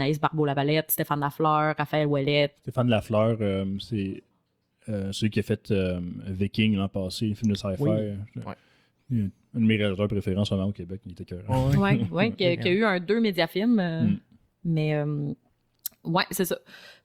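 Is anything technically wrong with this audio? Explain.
No, nothing is technically wrong.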